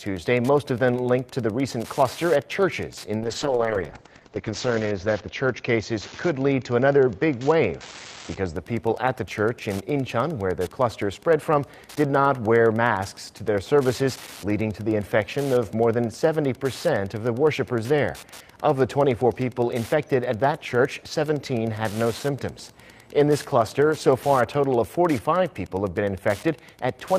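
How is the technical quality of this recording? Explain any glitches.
The recording has two clear technical problems: constant interference ticking underneath and a stretch of degraded, muffled coding early on.

Wi-Fi interference runs through the whole clip. A nearby Wi-Fi radio's signal is being picked up and rectified by the audio circuit, so its beacon, every 102.4 ms, turns into a steady tick about ten times a second, sitting roughly 25 dB below the sound.

A call bitrate drop runs from 3.19 s to 8.61 s. The link's bandwidth estimate fell and the encoder was starved of bits, which fits a fall from about 40 kbps to 8 kbps. Coarser coding makes the audio rough and watery, and the top end is cut from 20 kHz to 8 kHz, dulling it. It is worst for about 1.2 s before recovering.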